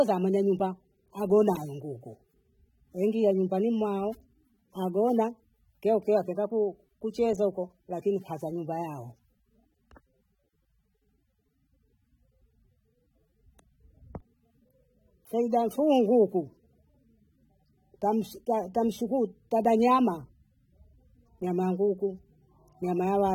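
From start to finish the speech carries AAC compression damage you can plainly hear, likely from an AAC-LC encode at a low rate, something like 27 kbps. The encoder splits each frame into frequency lines and spends its few bits where the hearing model says they matter most, so the detail it skimps on comes out smeared, with a swirly, fizzy edge on sibilants. Oddly, the top end still reaches about 19.4 kHz.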